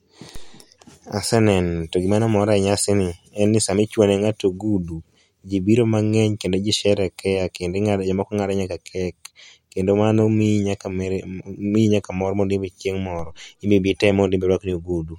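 At 0.36 s and again at 13.19 s, just after "mor mondo imbe chieng'", a DC step shifts the waveform's zero line abruptly and then eases back. Each one is heard as a low thump under unchanged speech, shown as a vertical broadband stripe on the spectrogram.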